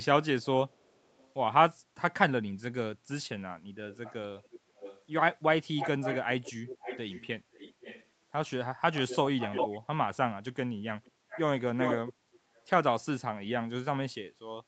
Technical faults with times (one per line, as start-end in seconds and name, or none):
0.42-1.33 echo leak
3.92-5.01 echo leak
5.77-8.07 echo leak
8.93-9.80 echo leak
11.04-11.40 echo leak
11.79-12.64 echo leak